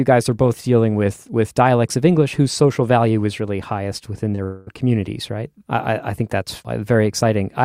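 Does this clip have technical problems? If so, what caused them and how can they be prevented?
Yes. Just after "is really highest within", two short concealed packet losses at 4.31 s and 4.35 s each lost about 20 ms. The receiver filled each gap by extending the preceding sound, producing a brief smear.

From 4.43 to 4.69 s, a long network dropout, likely from a stalled connection, removed about a quarter second. Concealment stretched the last sound into a fading buzz or hiss until "communities right I I" resumes. On the waveform this is a decaying, featureless stretch rather than true silence.

A larger jitter buffer, forward error correction and a steadier, less congested link would prevent both.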